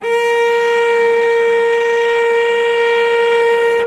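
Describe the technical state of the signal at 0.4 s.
The signal is intact at 0.4 s, with no audible fault at that moment.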